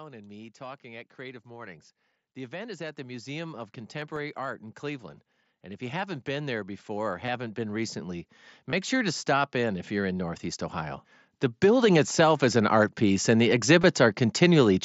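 From 0.05 to 11.02 s, automatic gain rising lifts the level by about 20 dB. The gain control judged the input too quiet and opened up slowly, so the speech and the background noise swell together over those eleven seconds rather than jumping.

At 3.73 s there is concealed Bluetooth headset packet loss. A gap of about 7.5 ms, consistent with one lost mSBC frame, was filled by repeating recent waveform and is almost inaudible.

Between 4.02 and 4.45 s come four CD scratch ticks. A blemish on the disc defeated error correction once per revolution, and the player interpolated across the damage. Each fault is heard as a brief click, the longest about 1.5 ms.

At 7.26–7.28 s and again at 8.70–8.73 s, longer concealment runs of about 22.5 ms each, which fits three consecutive lost frames, replace the speech with a short buzzy held tone. A slight warble follows as real audio resumes.

From 11.6 to 13.29 s the automatic gain rises again, this time by only about 3 dB, a gentle swell of the speech and the background together.

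At 13.82 s a final concealed loss of about 15 ms gives a brief buzz, which points to two missing frames.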